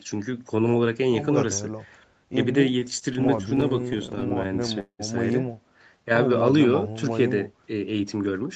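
From 2.71 to 5.02 s, repeated stalls (stutter): the jitter buffer kept running dry, so 29 short gaps, the longest 191 ms, were filled by stretching the last sound. Nothing is lost, but the speech drags and stutters.

From 5.97 to 6.29 s, a jitter buffer slow-down repeats pitch periods to rebuild its reserve, adding 41 ms. The speech plays at 90% speed with unchanged pitch.

From 8.12 to 8.42 s, a jitter buffer speed-up trims pitch periods to cut excess delay, removing about 40 ms. The speech runs at 112% speed, hurried, with content still band-limited at 8 kHz.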